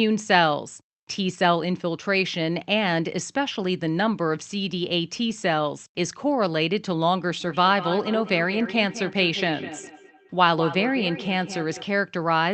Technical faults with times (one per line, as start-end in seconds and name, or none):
7.40-11.89 feedback echo between two devices